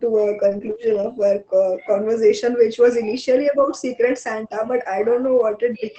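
From 0.49 to 0.55 s comes a lost packet rebuilt from error correction. About 40 ms of audio was lost, consistent with two 20 ms packets. The decoder played the low-bitrate copies carried in the following packets, so there is no gap, only a rougher, noisier patch.

At 0.57 to 0.61 s a short concealed packet loss follows. About 20 ms never arrived in time, and the receiver extrapolated roughly 15 ms from the preceding signal before blending back. It is heard as a brief smear or wobble.

From 0.61 to 1.04 s error-correction rebuilding resumes over about 220 ms, which points to twelve lost packets. The sound stays continuous but turns grainy and coarse in the rebuilt stretches, heard through the Opus call path's 8 kHz bandwidth limit.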